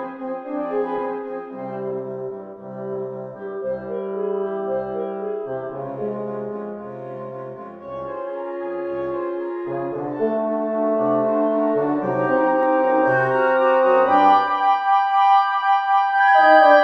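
At 12.63 s the audio has a single sharp click, a brief tick that would show as a thin vertical line running up the spectrum. The likely cause is dropped samples: a couple of samples, a tiny fraction of a millisecond, went missing from the stream, so the waveform jumps straight from one value to a later one. That step is far too short to take away any of the sound itself, but the abrupt discontinuity is what produces the click.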